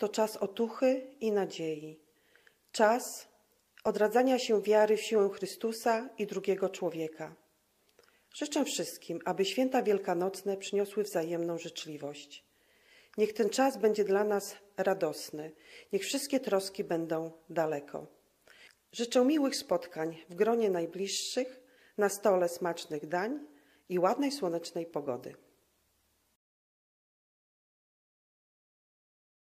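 Nothing stood out on listening; no technical problem could be heard at any point in the audio.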